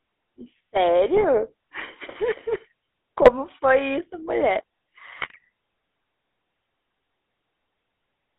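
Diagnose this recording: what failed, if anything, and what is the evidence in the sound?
The codec stage shows GSM full-rate codec damage across the whole speech clip. It has a buzzy, gravelly roughness from the pulse-driven excitation, which keeps only every third sample, and a band of roughly 300 Hz to 3.6 kHz, which fits a 13 kbps full-rate link. Plain band-limiting would be smooth, but this grain sits inside the voice itself.

The radio link shows GSM bit errors at 1.15 to 1.25 s, 3.22 to 3.31 s and 5.19 to 5.37 s. There the speech breaks into squawks, pops and gargling as corrupted filter, pitch and gain values distort spectrum and level frame by frame. Packet loss would leave gaps or smooth concealment, not these outbursts.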